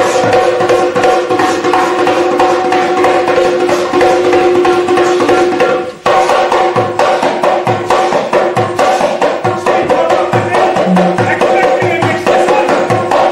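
Across the whole clip, some stage is driven about 6 dB past its ceiling, so the peaks, a small share of samples, are cut flat in hard clipping. The squared-off tops add high harmonics, heard as crackle on the loudest moments of the sound.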